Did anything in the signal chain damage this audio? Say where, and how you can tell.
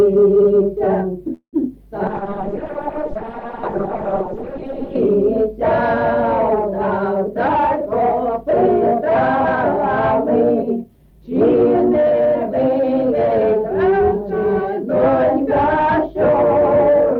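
Yes, at four points in the network and call-processing stages. From 1.33 to 1.56 s there is a call audio freeze. The most likely cause is packets held up in transit, so the jitter buffer ran dry. The receiver stretches the last sound into a fading buzz and then about 100 ms of silence. When packets resume, the audio picks up exactly where it stopped. The result is an inserted gap of roughly 0.2 s with nothing lost.

From 2.11 to 5.07 s there is a call bitrate drop at the codec stage. The bandwidth estimate collapsed and the encoder went from 64 kbps down to 6 kbps, holding that floor for about 2.9 s. At that rate the coding is very coarse and the high frequencies are cut away. The sound turns muffled, rough and watery until the rate climbs back.

Jitter buffer speed-up occurs twice, from 7.47 to 8.53 s and from 10.40 to 11.55 s. Both times the buffer held more audio than its target, and the receiver trimmed short pitch-period-length slices repeatedly to shed the excess delay. 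Each stretch plays at about 107% speed with unchanged pitch. The first removes something under a tenth of a second and the second about a tenth, so both passages sound slightly hurried.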